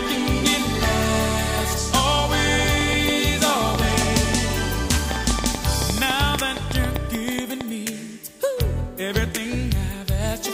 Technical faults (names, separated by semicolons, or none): train of clicks